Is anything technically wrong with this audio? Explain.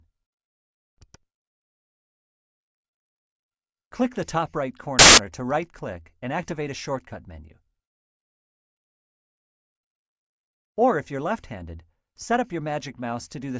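Yes. There is one fault: file tags played as audio. From 4.99 to 5.18 s, a burst of loud white noise cuts in and stops abruptly. It lasts about 0.19 s. Here the decoder read a block of embedded file data as if it were samples. The block was a cover picture, which is compressed data. Compressed bytes look nearly random, so they play back as very loud white noise.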